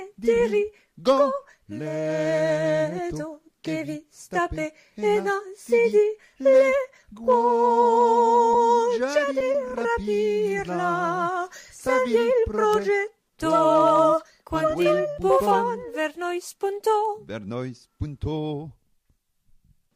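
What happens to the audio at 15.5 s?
Nothing goes wrong at 15.5 s; the audio plays through that moment intact, with no dropout, click or distortion.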